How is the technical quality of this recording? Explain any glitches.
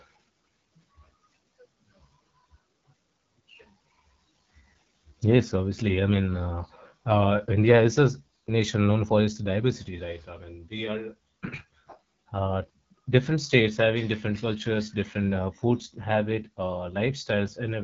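The technical quality is limited by one fault present for the whole recording: AMR wideband (HD Voice) codec damage, plainly audible from start to finish. The speech has a rough, raspy edge, with nothing above 7.5 kHz. The codec models the vocal tract and drives it with sparse pulses, filling the top band with shaped noise. The harshness points to one of its lowest modes, which fits about 8.85 kbit/s.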